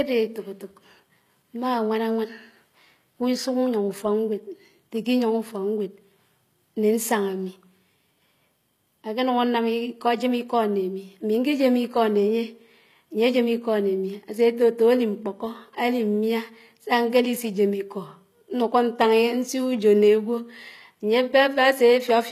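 HE-AAC compression, throughout: the treble above the low-band crossover is likely rebuilt from copied lower bands, so sibilants sound gritty and lispy, with nothing above 14.9 kHz.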